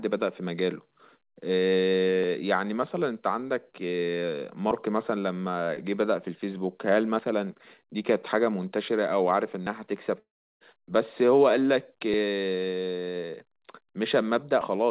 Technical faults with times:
10.19-10.63 long network dropout

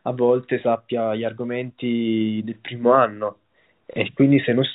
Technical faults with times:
3.93-3.96 packet loss with last packet repeated

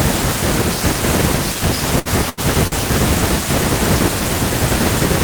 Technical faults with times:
1.99-2.40 burst of packet loss
2.67-2.75 short stall from a late packet

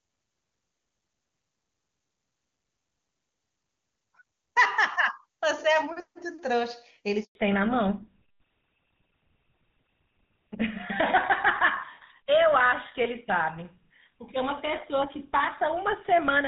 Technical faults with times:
7.23-7.35 handover gap
7.35-16.47 fallback to narrowband

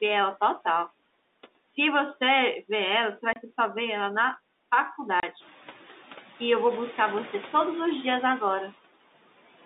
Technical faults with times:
0.00-9.66 noise suppressor artifacts
3.33-3.36 packet loss filled with silence
5.20-5.23 packet loss filled with silence

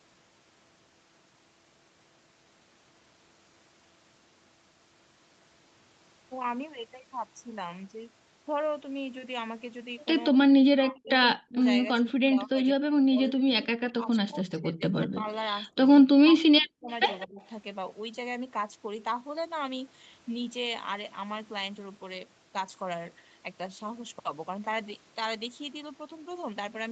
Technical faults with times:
10.31-10.37 speech suppressed in double talk
10.73-11.59 speech suppressed in double talk
12.12-15.28 speech suppressed in double talk
15.70-16.88 speech suppressed in double talk
16.89-17.26 echo leak
17.26-17.40 speech suppressed in double talk

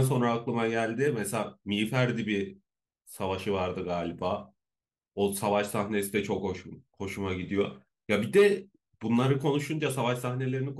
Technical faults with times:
none

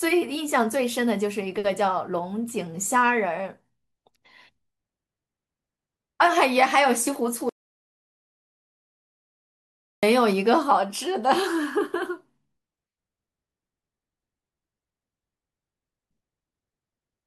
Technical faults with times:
7.49-10.03 audio dropout to silence

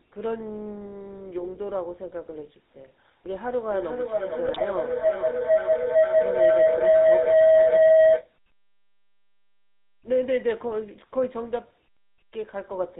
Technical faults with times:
0.00-13.00 GSM full-rate codec
3.49-8.35 feedback howl
4.47-4.61 GSM bit errors

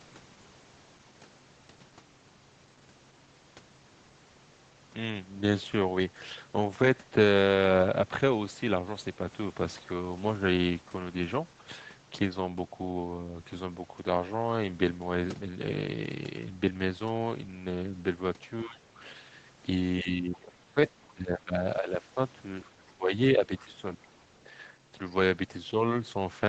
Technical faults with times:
18.64-19.01 speech suppressed in double talk
20.01-20.78 speech suppressed in double talk
20.33-20.38 other side's voice leaking through
21.14-22.17 speech suppressed in double talk
22.63-22.90 other side's voice leaking through
22.70-24.05 speech suppressed in double talk
23.57-23.62 other side's voice leaking through
24.08-24.22 other side's voice leaking through

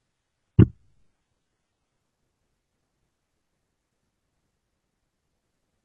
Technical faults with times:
0.00-2.00 adaptive stream starting at a low bitrate

